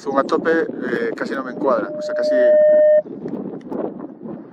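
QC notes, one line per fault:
1.41–3.03 s, loudspeaker feedback squeal: a single tone at 606 Hz rises out of the sound, swelling over about a second until it sits roughly 10 dB above everything else, then stops. The microphone is hearing its own loudspeaker, and at that one frequency the loop gain passes unity, so the tone feeds itself. The slow self-driven swell separates it from mains hum or a fixed interfering tone, which would hold steady from the start.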